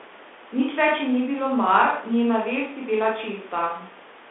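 Across the whole clip the speech carries the sound of a Bluetooth CVSD headset codec. Its band runs from about 250 Hz to 3.5 kHz, and a spectrogram shows nothing above 3.8 kHz, a hard ceiling over every syllable. The one-bit delta coding, which fits a 64 kbps link, leaves plainly audible damage: s sounds turn scratchy, loud bright onsets slur where the adapting step lags, and a fine granular hiss fills the gaps as a grainy floor on the waveform.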